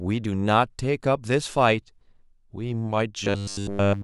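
Robotic sound from repeated short buffers, 3.24 to 4.03 s: the speech turns into a rigid metallic 100 Hz buzz, likely a 10 ms buffer replayed almost continuously.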